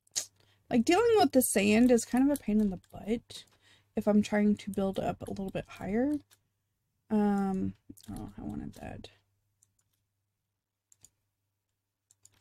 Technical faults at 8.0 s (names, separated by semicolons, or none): none